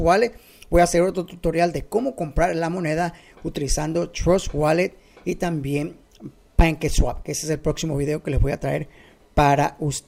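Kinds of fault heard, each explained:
No technical fault can be heard anywhere in this audio, with no break or glitch to point to.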